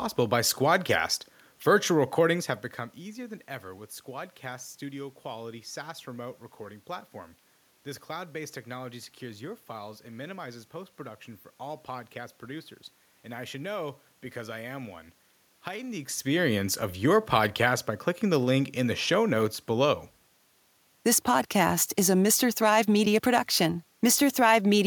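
Nothing's gone wrong on the technical side here: the room's own background noise sits under the speech all along, and the shifts in level at around two and a half seconds and again near 16 seconds are just the talker moving nearer to or farther from the microphone.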